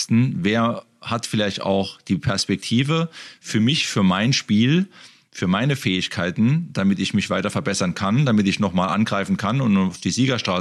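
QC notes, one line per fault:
No faults heard.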